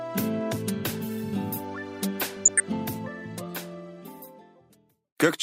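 From 2.26 to 2.60 s there's a stretch of DAB burbling. Weak reception let bit errors, roughly 0.2 percent, slip past error correction into the MP2 stream, so wrong samples and scale factors make individual sub-bands blip and jump in level, giving a bubbling, watery sound.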